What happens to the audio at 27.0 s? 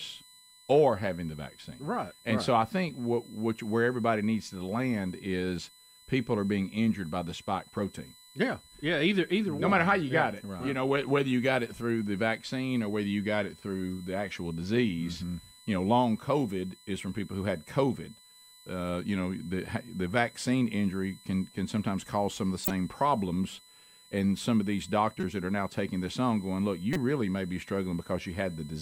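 Just before 27.0 s, a corrupt frame is decoded. It runs from 26.93 to 26.96 s, between "this on going look" and "really may be". It lasts about 32 ms, roughly one compressed frame. Flipped bits in that frame were decoded anyway. Wrong gains and misread codes put energy at the wrong frequencies. The result is a short, sharp blip or chirp, peaking around -15 dBFS.

Under it, a USB whine continues as it does throughout. Its fundamental is 1 kHz, and it is strongest at 4 kHz. It sits roughly 25 dB below the speech. This is current drawn in the bus's 1 ms frames leaking in through power or ground. It is heard as a thin, steady, fixed-pitch tone.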